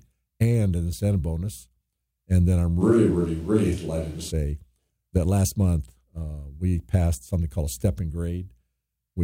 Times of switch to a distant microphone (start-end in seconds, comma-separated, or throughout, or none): 2.82-4.30